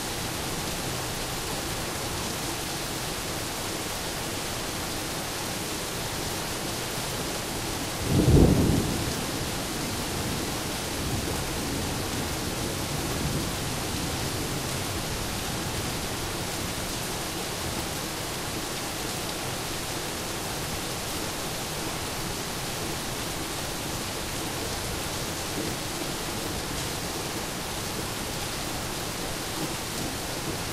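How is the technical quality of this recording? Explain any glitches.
No technical faults can be heard in this recording of everyday sounds. Nothing in it calls for explanation as a glitch.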